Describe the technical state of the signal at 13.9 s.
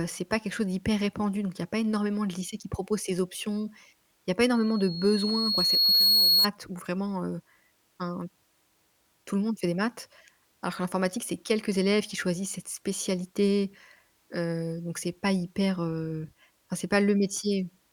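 At 13.9 s the speech signal is intact, with no audible fault at that moment.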